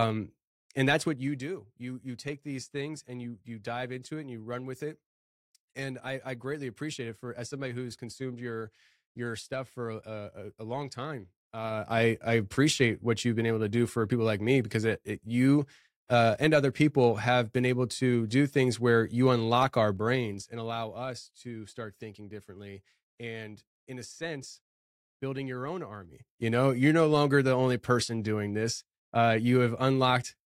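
Zipper noise appears at 0.93 to 1.49 s, 19.88 to 20.99 s and 26.01 to 26.47 s. The level moves in unsmoothed 2 dB steps. It falls about 10 dB twice, then rises about 10 dB. Each step clicks, so the speech carries a ticking zip.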